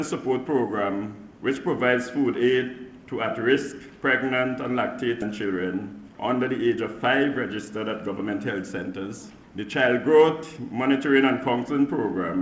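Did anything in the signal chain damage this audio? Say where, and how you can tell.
Yes. Skip ahead at 5.22 s, in the network or jitter buffer: about half a second of audio disappears, and the two sides join directly with no gap.

Jitter buffer speed-up at 5.44–6.78 s (109%), 7.28–8.30 s (104%) and 8.88–9.96 s (106%): the buffer removed pitch periods, so the sound runs faster at unchanged pitch.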